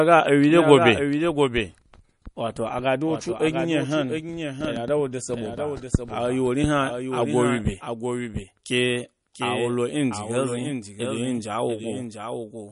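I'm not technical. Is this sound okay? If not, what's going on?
No. The whole recording has a doubled audio track. A second, quieter copy of the speech trails about 0.7 seconds behind, likely from a delayed second path.

It also shows heavy MP3 compression throughout, likely from squeezing the file too small. The crisp top end is cut off, and the speech sounds watery and swirly.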